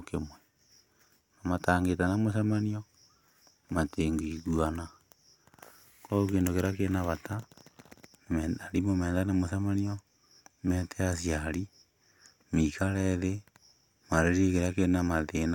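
No technical faults can be heard anywhere in the speech recording. Nothing in it calls for a time mark or a fault description.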